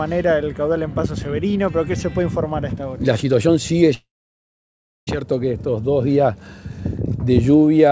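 A long network dropout is the likely cause of the gap from 3.94 to 5.09 s. With no audio arriving, the receiver stretches the last sound into a fading buzz, then leaves about a second of silence. When the G.722 call audio, capped at 8 kHz, resumes, 1.14 s is missing.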